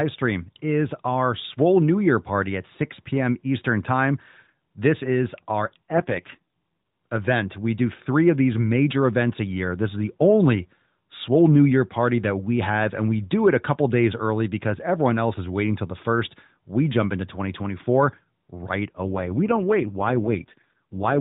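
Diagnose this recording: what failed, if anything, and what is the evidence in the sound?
AMR rate drop, network side: after "is our" (5.92–6.39 s) and again at 19.02–21.2 s, the speech goes buzzier with no gap or band change, which fits a 12.2-to-4.75 kbps fallback.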